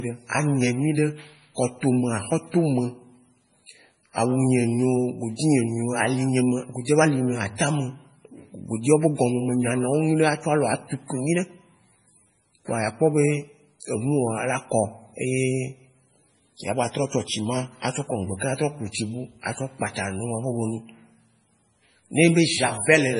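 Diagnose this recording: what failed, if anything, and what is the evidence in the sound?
The damage is at the codec stage, and it runs the whole way through. The speech has a watery, swirly texture, s sounds come out with a metallic chirp, and there's nothing above 10.5 kHz, a hard treble ceiling. That's likely MP3 compression at a very starved bitrate, something like 24 kbps. With so few bits the encoder chopped the top end and kept dropping quiet frequency lines in and out frame to frame, which produces that heavy swirl.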